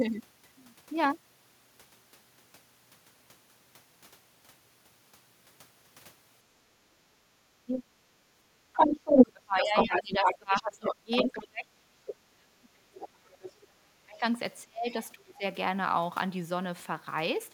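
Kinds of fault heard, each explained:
Background gated by the echo canceller: the canceller clamped the microphone while the loudspeaker played, so room sound drops about 14 dB from 6.96 to 7.37 s.
Speech suppressed in double talk: likely the canceller mistook overlapping talk for echo, so the voice falls deeply, around 35 dB at 7.66–8.01 and 8.67–14.24 s and around 30 dB at 14.64–15.43 s.
Other side's voice leaking through: residual loudspeaker echo likely escaped cancellation, with a second voice louder than the talker from 8.75 to 11.38 s and a faint scrap near 13.4 s.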